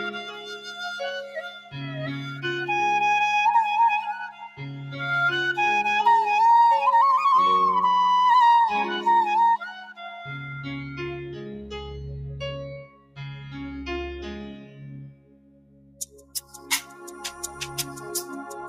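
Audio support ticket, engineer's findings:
Noise suppressor applied to music or sounds, whole clip. Speech-tuned suppression treating sustained tones, ambience and tails as noise. Gain swings of roughly 15 dB, pumping and thinning on held material. Spectrogram: sustained partials and reverb haze fade between onsets while transients stay bright. Waveform: envelope dips after each attack. Probable component: noise suppression stage left enabled in the processing chain.

Sound cut by the noise suppressor, at 0.14–1.01 s (about 11 dB), 1.24–1.74 s (about 15 dB), 2.27–2.42 s (about 5 dB), 4.29–4.6 s (about 12 dB), 9.76–10.19 s (about 15 dB), 12.84–13.19 s (about 16 dB), 13.36–13.54 s (about 4 dB), and 14.47–17.61 s (about 17 dB, longest). Decays cut short, steady sound sinks. Waveform shows amplitude collapsing mid-sustain. Spectrogram shows gaps carved across bands.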